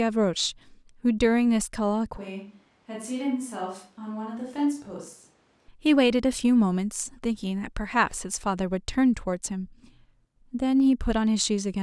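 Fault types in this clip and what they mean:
Switch to a distant microphone: From 2.17 to 5.68 s, the speech turns suddenly roomy and thin, about 5 dB quieter, with more room noise. Likely a farther microphone.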